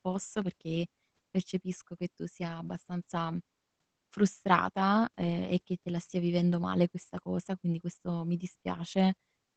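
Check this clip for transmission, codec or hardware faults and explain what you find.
One fault runs throughout: Opus voice compression. The SILK coder, at a rate consistent with roughly 12 kbps, trims the band near 8.8 kHz and quantises the excitation coarsely, so the speech sounds muffled, hoarse and slightly robotic.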